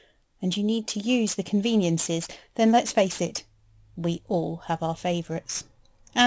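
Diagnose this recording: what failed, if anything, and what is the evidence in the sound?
The failure is in the sample-rate conversion stage. The fault is aliasing, and it runs through the whole clip. Sibilants sound gritty and metallic rather than crisp. The spectrum stays dense right up to a hard edge near 8 kHz, which points to a drop to a 16 kHz rate. The rate was cut without an anti-aliasing filter first. Content above 8 kHz folded back down to unrelated frequencies. Those false components sit roughly 20 dB below the speech.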